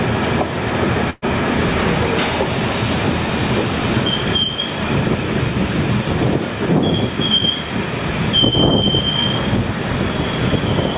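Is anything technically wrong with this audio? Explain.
Yes. A burst of packet loss occurs at 1.1 to 1.25 s. About 120 ms of audio never arrived, so the receiver extended the last sound and faded it down, leaving a held buzz or hiss before the audio jumps ahead. Unlike a plain dropout, the gap is not silent. The call path's 4 kHz ceiling is audible throughout, which fits G.711 telephone coding.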